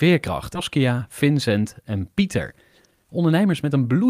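It's a speech clip with a skip ahead at about 0.55 s: roughly 0.7 s of audio gets dropped and the two sides butt together with no gap. Then from 2.85 s to 4.09 s there's a jitter buffer speed-up, with tiny pitch-period slices trimmed repeatedly to drain about 0.3 s of backlog, so it plays 20% faster at unchanged pitch.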